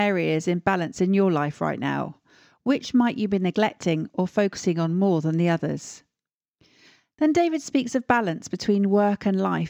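Sample clock jitter runs through the whole speech recording. The converter's clock wanders by roughly a microsecond and a half, so each sample lands slightly early or late, and the error scales with how steeply the waveform is moving. It sounds like a faint hiss or grit riding on louder and brighter sounds, sitting around 45 dB below the signal, and gone in pauses. A spectrogram shows a low noise haze that appears only under active sound and is strongest at high frequencies. The waveform looks normal.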